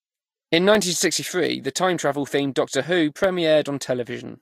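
At 0.75 s and 3.24 s, a block of digital silence zeroes under 1 ms of speech: a tick, a flat waveform notch, a vertical spectrogram line.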